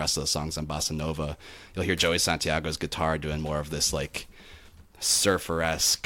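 Sample clock jitter runs from 4.31 s, just after "more of this like", to the end at 6.05 s. The converter's clock wavers by a few microseconds, so steep parts of the speech waveform are sampled off-target, adding a hiss roughly 20 dB below the signal that thickens on loud, bright sounds and disappears in pauses.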